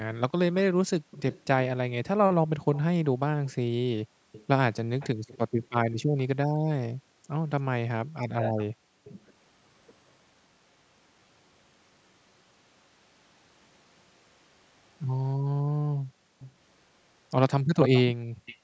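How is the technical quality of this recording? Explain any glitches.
The recording has clear echo-canceller trouble on a speakerphone call, with three kinds of glitch across the 19 seconds of speech.

Echo leak: from 1.11 to 6.68 s, at 9.04 s, at 14.34 s, at 16.39 s and from 17.8 to 18.58 s, a delayed copy of the speech trails the original. The far end's canceller likely failed to subtract all of what its microphone picked up from its loudspeaker. The delay grows from 312 ms to 398 ms. The echo sits about 25 dB down early on but only about 5 dB down by the end. On a spectrogram it shows as a weaker, time-shifted repeat of the speech harmonics.

Background gated by the echo canceller: from 5.49 to 5.63 s and from 15.95 to 16.39 s, the room tone suddenly ducks and then returns. While its loudspeaker was playing, the canceller clamped the microphone down to hide echo. The first dip is about 20 dB deep and lasts roughly 150 ms. 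The second is about 40 dB deep and lasts roughly 400 ms. On a waveform the noise floor shows as a flat notch with abrupt edges.

Speech suppressed in double talk: between 8.29 and 9.17 s, the talker's voice drops out in pieces, about half a second in all and as deep as around 40 dB. Both sides were speaking at once, and the canceller likely could not tell its own talker from the loudspeaker echo, so it attenuated everything. A spectrogram shows the harmonics thinning and breaking into gaps. The overlapping echo at 9.04 s sits inside this stretch. Across the whole clip nothing appears above 8 kHz, which is the normal limit of the call's microphone path.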